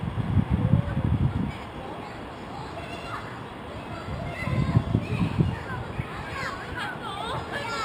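Throughout the clip there is imaging from linear upsampling. The audio appears to have been raised from a 12 kHz rate to 48 kHz by straight-line interpolation between samples, a weak filter. The top of the original band, near 6 kHz, sounds dulled, and a mirrored copy of the spectrum remains between 6 kHz and 12 kHz, roughly 30 dB below the signal. It adds a faint metallic shimmer to the brighter sounds.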